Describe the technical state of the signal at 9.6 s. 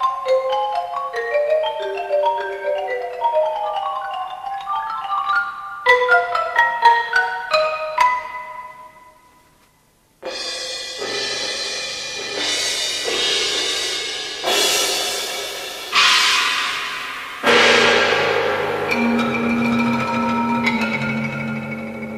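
At 9.6 s the signal is intact, with no dropout, distortion, noise burst or other fault present at that point.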